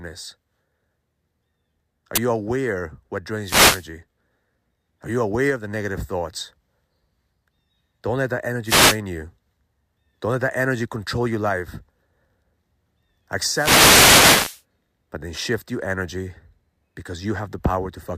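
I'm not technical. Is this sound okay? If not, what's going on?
No. At 2.16 to 2.18 s, just before "you aware what", an uninitialised buffer was played: the system sent out a block of memory before any audio was written into it. That leftover data comes out as a loud crack, and its length fits a 20 ms block.

The other problem is a wireless microphone noise hit, which happens three times. The radio link from the microphone weakens when reflected signals cancel each other, so the receiver's own hiss rises into a swish or burst of static. You hear it from 3.40 to 3.87 s after "you aware what", from 8.64 to 8.99 s after "let that", and from 13.47 to 14.62 s.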